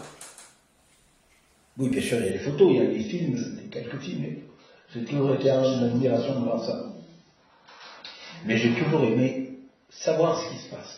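At 1.92 s the sound jumps forward with no silence between the two sides. This is most likely a dropped buffer (overrun): the program failed to collect a block of samples before the hardware overwrote it, so about 10 ms of audio is missing and the edges butt straight together. Because nothing is muted, it reads as a skip rather than a gap or dropout.

From 2.31 s to the end, quality falls abruptly as an adaptive stream switches to a lower bitrate, and codec artefacts thicken. This fits a switch from roughly 96 down to 16 kbit/s AAC. It differs from a plain low-pass filter because the change is a sudden step with no gap, accompanied by added coding artefacts.

At 4.44 s a second jump occurs, likely another dropped buffer losing about 10 ms, now heard within the reduced-bitrate audio.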